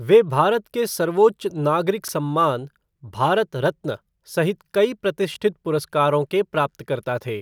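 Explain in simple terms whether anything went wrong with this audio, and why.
Chunks out of order: tiny slices of the speech, each about 12 ms long, arrived late and played after slices meant to follow them. At 2.04–2.09 s one slice was three places late, and at 5.34–5.36 s one was a single place late. Nothing is missing, but each spot sounds like a brief jumbled blip.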